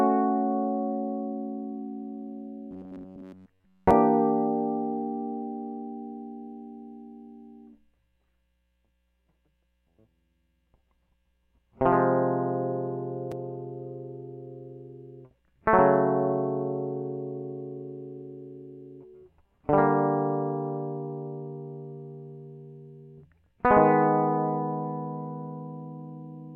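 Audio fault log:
2.71–3.91 s, robotic sound from repeated short buffers: the music turns into a rigid, metallic buzz near 93.8 Hz. New audio likely arrived too seldom, so one slice of about 11 ms kept repeating, covering most of this stretch while the real audio was skipped.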